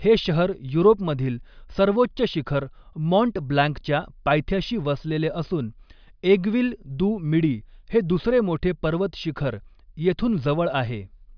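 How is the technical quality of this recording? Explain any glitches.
No glitches or technical faults can be heard anywhere in the recording.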